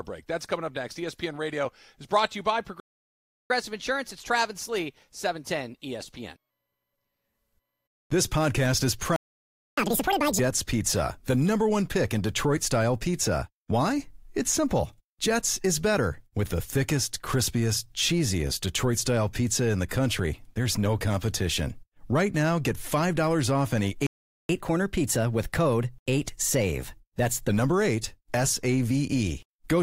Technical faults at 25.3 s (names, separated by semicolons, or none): catch-up at higher speed